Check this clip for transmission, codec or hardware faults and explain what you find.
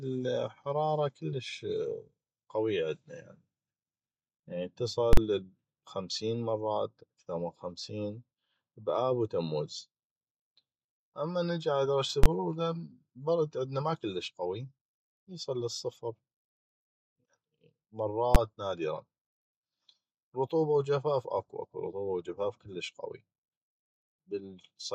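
Three faults of one kind are present: invalid numbers at full scale. They occur at 5.13–5.17 s, 12.24–12.26 s and 18.35 s. A calculation in the processing chain produced infinite or invalid values, and these were clamped to maximum positive or negative output for a whole processing block. The first run lasts about 43 ms and the second about 21 ms, both fitting 2048- and 1024-sample blocks, so each sounds like a loud pop at entry and exit with the speech dropped out between. The last is short enough to be a single bang.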